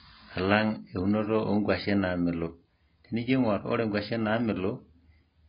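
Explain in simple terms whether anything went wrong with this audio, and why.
Something did go wrong, and it lasts the whole clip. The speech sounds dull and muffled, as if heard through a wall. Nothing is left above about 5.1 kHz, so the crisp edges of sounds like s and t are gone. Hissy sounds also turn fizzy and warbly. This is most likely AAC compression applied very heavily. To save space, the encoder throws away high frequencies and blurs the detail it keeps.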